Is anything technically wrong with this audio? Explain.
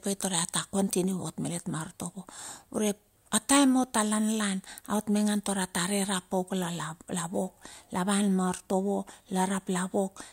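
No, nothing in this speech recording is technically wrong. Listening to the whole clip turns up no fault that needs explaining.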